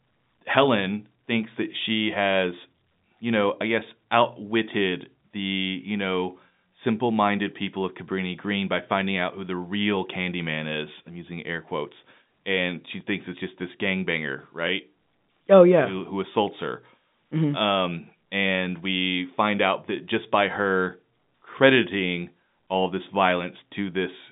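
Nothing stood out on listening to this speech.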